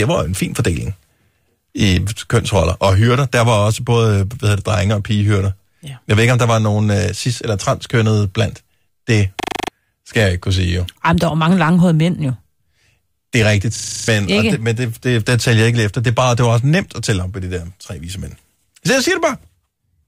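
At 9.4 s and again at 13.76 s the speech locks into a system hang loop: the same 40 ms slice of audio repeats back to back, seven times up to 9.68 s and eight times up to 14.08 s, just before "skal jeg ikke kunne" and "ikke det men det". The output froze while the sound hardware kept replaying one ring buffer, giving a harsh 25 Hz rattling buzz. Roughly a third of a second of speech is lost each time.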